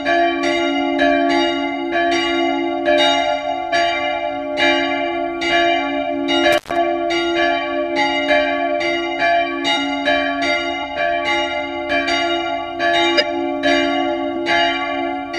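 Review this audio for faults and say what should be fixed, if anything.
Compressed frames skipped at 3.72 s, 9.75–9.77 s and 13.17–13.23 s: the decoder drops whole frames, so the audio jumps ahead, roughly a tenth of a second at the first and last and a little less at 9.75 s. Re-encode from a clean source and check the file's integrity after transfer.

Intermittent contact from 6.53 to 6.77 s: a loose connection opens for about 125 ms, so the sound cuts out with crackle at both edges and faint hiss underneath. A digital dropout would be cleanly silent and lack that crackle. Reseat or replace the cable and plug before recording.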